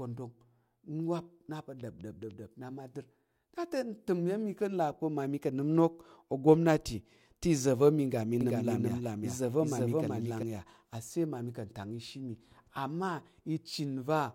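At 8.41 s, just after "iza̱ va̱ mi ga", a doubled audio track begins and runs until 10.43 s. The speech is heard twice. A second copy trails the first by roughly 400 ms and sits about 5 dB lower. It is full-band and dry, with no decay or room colour. It cuts in and out abruptly. The likely cause is a second, slower capture path or an edit that left two offset copies overlapping.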